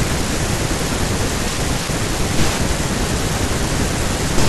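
Nothing wrong turns up in this short bit of speech; it's a fault-free recording as far as the ear can tell.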